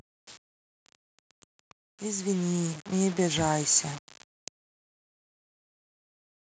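Across the whole speech clip there is a grainy, gritty distortion that follows the voice and thickens on quiet passages, sitting only around 15 dB below it. This is likely low bit depth without dither, with samples truncated to about five bits.

From 2.01 to 3.77 s, voice and background swell together, rising by about 7 dB over almost two seconds. This is automatic gain rising: the gain control judged the input too quiet and gradually increased its gain.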